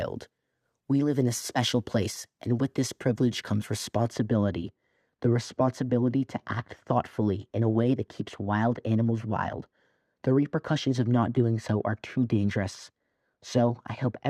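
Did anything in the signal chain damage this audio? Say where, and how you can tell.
Yes. De-emphasis was applied wrongly at playback from 4.07 s, after "with this privilege comes". A smooth treble roll-off, about 13 dB down at 10 kHz, muffles the speech.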